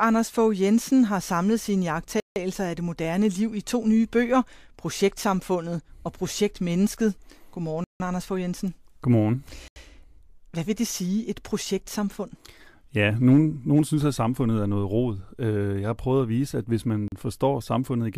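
The playback path dropped blocks of samples and replaced them with zeros, likely because the output buffer was not filled in time. This block of digital silence cuts the speech to nothing and back with no fade. It occurs at 2.2 s for 160 ms, between "har samlet sine" and "af det moderne liv"; at 7.84 s for 160 ms; at 9.68 s for 80 ms; and at 17.08 s for 40 ms, after "at vise at hvis".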